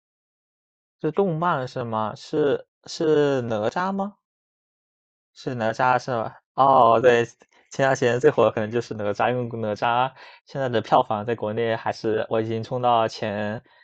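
Nothing in the speech stood out as a technical fault on listening.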